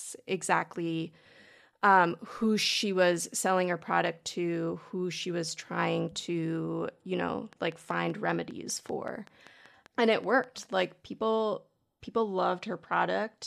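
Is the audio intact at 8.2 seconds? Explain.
No, 8.2 seconds falls inside a train of clicks running from 7.53 to 10.64 s: a steady ticking of similar pops, about 5.2 per second and around fifteen in all, roughly as loud as the speech. Likely cause: interference from nearby equipment or a faulty connection or power supply injecting repeated pulses.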